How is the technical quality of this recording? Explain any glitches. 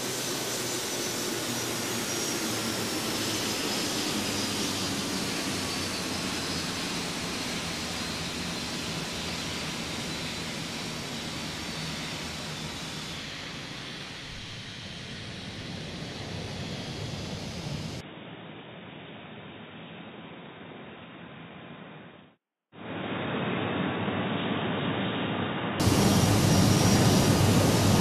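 The recording has one clear glitch, from 18.0 to 25.8 s. The input was likely switched to a poorer device, such as another microphone or a headset's call profile, which passes a narrower band. Nothing above 3.8 kHz gets through, so the sound turns dull and boxy, drops by roughly 10 dB, and picks up a faint new noise floor well below the signal. The change is abrupt, with no silence at the switch, and full clarity returns at 25.8 s.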